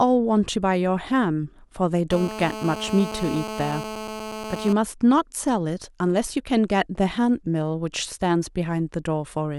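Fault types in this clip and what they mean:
GSM phone buzz: a 2G handset transmitting nearby pulses 217 times a second, and the audio circuit rectifies those bursts into a hard, raspy buzz rich in harmonics. Here it sits steadily, as during a call, about 10 dB below the speech from 2.11 to 4.73 s. Unlike smoother 50 or 60 Hz mains hum, it has a 217 Hz rasp.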